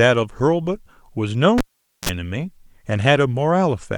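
A cable pulled and plugged in interrupts the speech from 1.58 s to 2.09 s. When the live connector is yanked, a sharp pop cuts the signal, leaving near silence for about 0.46 s. As the plug goes back in, only the tip makes contact at first, so roughly 40 ms of 60 Hz mains buzz leaks through ungrounded before a second pop marks the full connection and the sound resumes.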